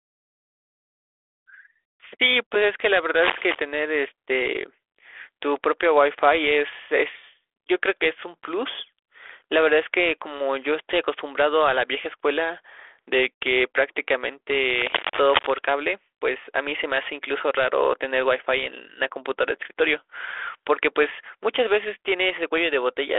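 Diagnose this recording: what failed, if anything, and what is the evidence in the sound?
Cable scratch noise, in the analogue wiring: ragged rustling bursts from 3.16 to 3.64 s, roughly as loud as the speech, and 14.77 to 15.51 s, slightly quieter. A spectrogram shows dense, irregular broadband streaks, and the waveform shows spiky, uneven clusters. The likely cause is a worn connector being moved, making its contact resistance flicker.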